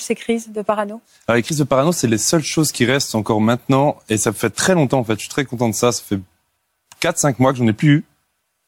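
Nothing stood out on listening to this speech clip.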